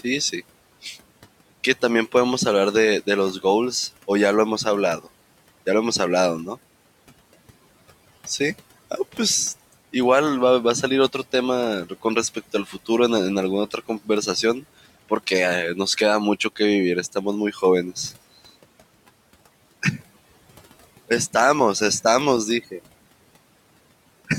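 The noise suppressor mistook parts of the speech for background and cut speech from 12.66 to 12.89 s and again from 17.52 to 17.63 s, pulling those moments down by about 9 dB, so soft sounds there come out swallowed and faint against room noise some 21 dB below.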